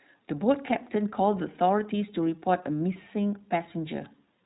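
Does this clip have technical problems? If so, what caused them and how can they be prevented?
Yes. The speech runs through the iLBC codec for its whole length, and the damage is plainly audible. Everything above about 3.9 kHz is gone, giving a narrowband telephone sound, and the voice has a rough, synthetic edge because each 20 ms frame's excitation is coded independently, which fits iLBC's 15.2 kbps mode. A spectrogram shows a flat ceiling near 3.9 kHz with blurred harmonics. Preventing this means recording or transmitting with a wideband codec at a higher bitrate.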